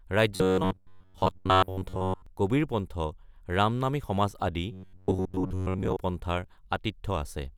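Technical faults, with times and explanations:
0.36–2.26 s and 4.72–5.97 s, robotic sound from repeated short buffers: new audio likely arrived too seldom, so a slice of about 10.7 ms was replayed over and over while most of the real audio was skipped. This forces a rigid, metallic 93.8 Hz buzz that only roughly follows the speech.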